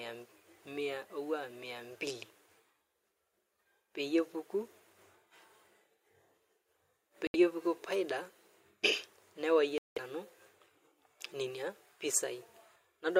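A speech clip with two short dropouts: the audio cuts to silence for about 71 ms at 7.27 s and about 186 ms at 9.78 s, then carries on. That's a Bluetooth stall, likely interference holding packets up until the headphone buffer ran dry.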